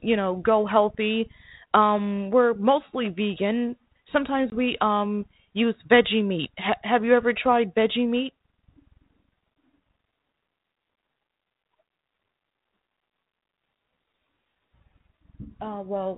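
Packet loss on an ADPCM call strikes at 4.50 to 4.54 s, a 20 ms gap, roughly one packet's worth of the speech replaced by silence. The hole has hard edges, and because ADPCM sends only differences from an adaptive prediction, the receiving decoder's predictor and step size drift away from the sender's during the gap. When the speech resumes it comes back slightly distorted, recovering within some tens of milliseconds as the G.726 coding at 32 kbit/s resynchronises.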